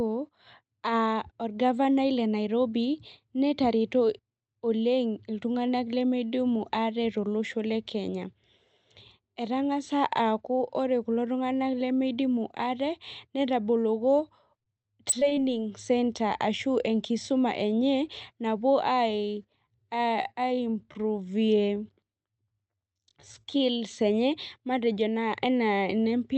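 Right after "tung'anak lemeidimu ate netaboloko", from 14.59 to 15.39 s, the speech turns choppy, with short bits smeared over and others simply gone. This is repeated packet loss (robotic sound): eight gaps hit in quick succession, none longer than about 24 ms. About 146 ms were covered by stretching the preceding sound, which makes up 18% of the span, and another 120 ms were lost outright. All of this passes through a call chain whose top end stops near 8 kHz, consistent with Opus at a modest bitrate.

From 19.60 to 23.82 s the pace abruptly drags to about 0.73 times normal speed while the pitch holds steady. This is a time-stretched section, likely produced by software lengthening the audio to fit a length. It keeps the pitch by repeating short overlapping slices of the waveform.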